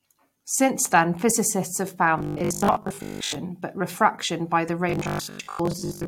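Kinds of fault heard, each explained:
Robotic sound from repeated short buffers: new audio likely arrived too seldom, so playback kept repeating the last 20 ms while most of the real audio was skipped. This lays a rigid 50 Hz metallic buzz over the speech at 2.19–3.41 s and 4.90–6.08 s.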